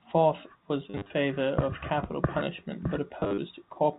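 From 0.9 to 1.1 s and again from 3.2 to 3.38 s, there is packet loss with the last packet repeated. Dropped packets were filled by replaying the previous one, in runs up to 40 ms, which fits 10 ms packets. Within the G.711 telephone band, the speech stutters robotically, with a brief buzz.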